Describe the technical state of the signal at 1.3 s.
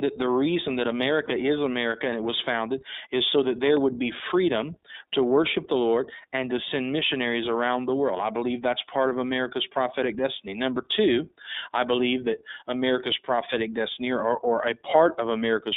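Lost iLBC frames occupy 1.26 to 1.30 s, just after "the reason that". The decoder filled the gap, which fits one missing 20 ms frame, by repeating the last pitch cycle blended with noise. It sounds like a brief held, slightly buzzy vowel. On a spectrogram it shows as flat, unchanging harmonic stripes with a noisy haze, and normal speech returns right after.

This moment also carries the iLBC codec's narrowband coding, at 15.2 kbps with 20 ms frames. Each frame's excitation is coded on its own, giving plainly audible roughness and a synthetic edge. A spectrogram shows energy confined to roughly 250 Hz to 3.7 kHz, with an empty band above.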